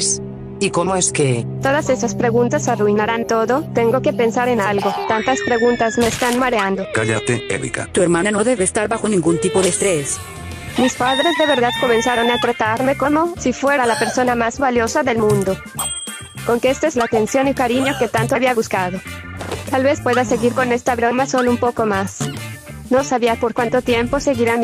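No technical faults can be heard anywhere in this recording.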